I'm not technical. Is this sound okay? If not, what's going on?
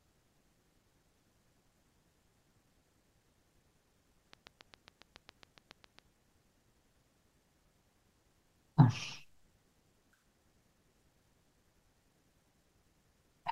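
No. There is a train of clicks from 4.33 to 6.00 seconds: about fifteen sharp ticks, evenly spaced at roughly seven per second, sitting on top of the speech and standing out clearly above it. Because the clicks are so alike and so regular, something is likely injecting a repeated electrical pulse into the recording, such as interference from nearby equipment or a faulty connection or power supply. After 6.00 seconds the ticking stops.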